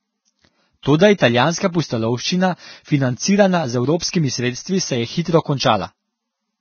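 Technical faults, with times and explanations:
Throughout: Vorbis compression. Nothing is left above 6.5 kHz, and the band beneath that cut-off is hissy and grainy, with roughened tone and softened consonant attacks. The damage is heavy and the sound likely comes from a low-rate Vorbis encode, which fits a bitrate around 17 kbps. At that rate the encoder keeps only a smooth spectral outline and quantises the upper detail so coarsely that it turns into noise of similar energy.
0.82–0.86 s, 3.99–4.02 s and 4.09–4.13 s: pre-echo. A short hiss runs ahead of each sharp onset for 33 ms, 27 ms and 43 ms respectively. The last two sit just before "sredstvi se". Each attack lands late in a transform block, so quantisation noise sized for the loud onset is spread across the whole block, including the quiet moment before it. That produces the brief hiss and leaves the attack sounding smeared.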